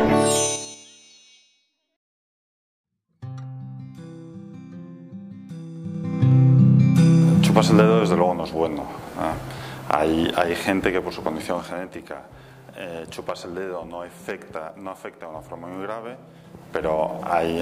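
Zipper noise at 0.46–0.84 s, 5.76–6.32 s and 11.33–11.98 s: level moves of roughly 20 dB down, 20 dB up and 10 dB down jump in unsmoothed steps of about 5, 3 and 2 dB, around ten a second, each step clicking.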